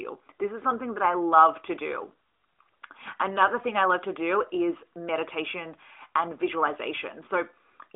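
No technical faults are audible.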